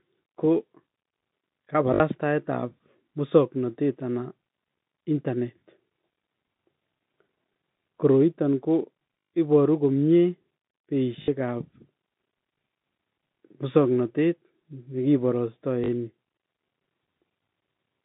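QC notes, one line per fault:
1.94 s, 9.2 s, 11.22 s and 15.84 s: packet loss with last packet repeated. Gaps of 60 ms, 120 ms (just before "iboru komye"), 60 ms and 40 ms are filled by replaying the last packet. Each replay restarts out of step with the pitch, and the longer runs buzz at a steady 50 Hz, which fits 20 ms packets. This gives a brief robotic stutter. On a waveform, identical blocks repeat every 20 ms. On a spectrogram, a frozen, smeared harmonic pattern sits inside the telephone band of 150 Hz to 3.7 kHz.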